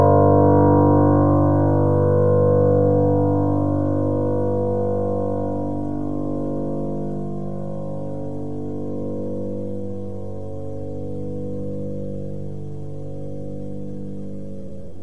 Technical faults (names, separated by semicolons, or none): none